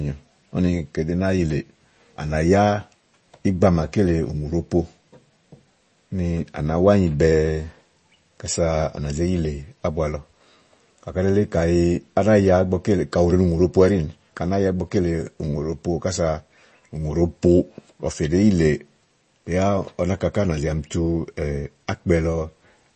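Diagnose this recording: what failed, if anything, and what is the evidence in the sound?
The fault sits at the codec stage and runs through the whole speech recording: MP3 compression. Nothing is present above 8.3 kHz, and the sound is plainly watery, with swirling on s sounds and smeared onsets. The likely cause is an encoder starved of bits, consistent with roughly 32 kbps, cutting the treble and dropping weak frequency lines frame to frame.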